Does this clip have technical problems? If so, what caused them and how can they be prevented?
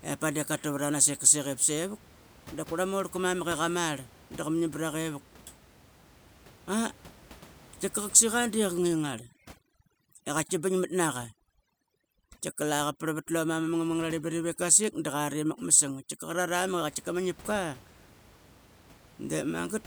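Yes. From 8.78 s to 16.48 s there is overdone noise removal. A noise reducer set far too aggressively cuts individual frequency bands whenever they sit close to its noise estimate, so the room noise, otherwise about 25 dB below the speech, collapses to near silence sprinkled with twinkling specks, and the quieter parts of the voice vanish with it. A spectrogram shows isolated flickering dots in an empty floor and ragged, holed harmonics, while the waveform's gaps go flat. To prevent it, use gentler reduction strength and less attenuation, checking by ear that speech detail survives.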